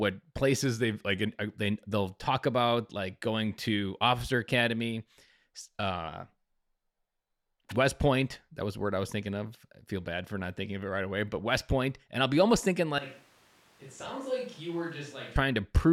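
Right at the start, from 0.62 to 1.29 s, the speech drops in speed and pitch together, about 6.3% slower and roughly a semitone flat (112 cents), then snaps back. That's likely a drift correction step, where clock-matching software briefly slowed playback to refill its buffer. The mirror image arrives at 6.07 to 6.75 s, about 6.3% faster and 105 cents sharp, likely the same correction draining the buffer instead. Both sound like a quick, lurching detune.

After "I'll be almost thinking", at 12.99 s, the sound abruptly turns roomy and hollow, with thinner bass. It's about 10 dB quieter, and room noise sits only about 25 dB below the speech. That points to a switch to a distant microphone, likely because the close mic's feed dropped out and a farther one, maybe the camera's, took over. It jumps back to the close sound at 15.36 s.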